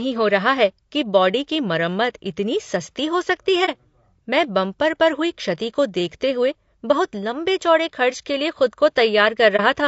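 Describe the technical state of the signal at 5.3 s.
Low-delay AAC compression is audible at 5.3 s, as it is throughout the clip. The speech sounds rough and grainy, likely because AAC-ELD's short frames resolve pitch harmonics poorly and leave noise between them, plainly audible damage that fits a bitrate around 32 kbps.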